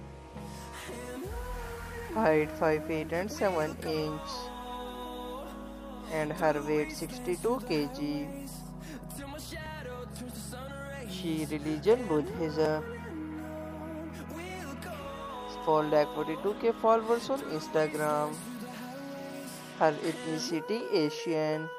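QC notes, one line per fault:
9.66, 12.66 and 20.81 s: jumps where the sound skips ahead, losing roughly 10, 20 and 10 ms. This is likely a dropped buffer (overrun): samples were overwritten before being read, and the two sides were joined with no gap.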